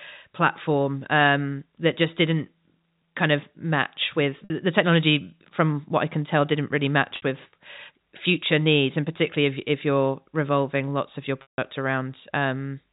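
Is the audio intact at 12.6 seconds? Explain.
Yes, the speech at 12.6 seconds is intact, with nothing breaking into it beyond the band-limited character of G.711 telephone coding.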